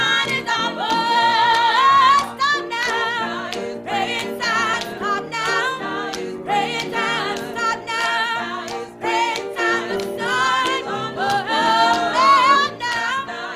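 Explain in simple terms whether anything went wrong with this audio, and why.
Compressed frames skipped at 0.59, 4.73, 6.89 and 12.55 seconds. The audio is stored in small chunks of 20 ms each, and at these moments some chunks never reach your ears, either because they're missing or because the player rejected them as damaged. The sound jumps forward: about one chunk first, then two, then roughly four, and finally around fifteen, losing about a third of a second.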